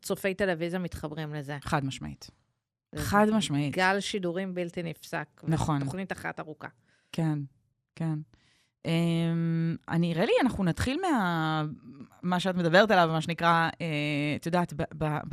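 From start to finish the speech has the dull, gurgling character of MP2 compression, most likely a Layer II encode at a rate consistent with 80 kbps. With too few bits to share among its 32 sub-bands, the encoder shuts off the upper bands and quantises the rest coarsely, so the top end is missing and a granular swirl clings to the voice. Unlike a plain low-pass filter, the missing bands flicker in and out rather than staying cleanly cut.

At 15.07 s, right at the very end, there is a brief DAB burble: short blips of noise in single sub-bands. A small fraction of bit errors slipped past error correction into the MP2 data, and corrupted samples put short noise blips into individual sub-bands. What sets this apart from the steady codec gurgle is that it is a sudden isolated event, not a constant texture.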